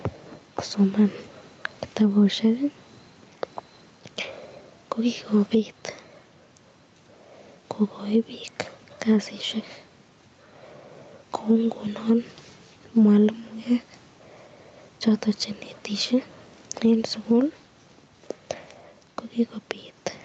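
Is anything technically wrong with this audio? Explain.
Yes. Gain pumping runs through the whole speech clip. The faint room noise sits far below the speech. The gain swings by around 5 dB, and loud and quiet syllables end up flattened toward one level. The likely cause is input gain set far too high for the microphone, with a fast limiter or compressor clamping it on each loud sound and releasing it in the gaps.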